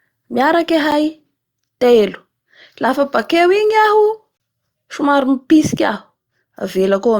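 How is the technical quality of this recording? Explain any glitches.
The recording has two dropouts. A block of digital silence hits at 0.91 s (8 ms) and from 4.37 to 4.40 s (30 ms), where samples were zeroed, likely from an unfilled output buffer. The first is a tick; the longer second one is a brief hole.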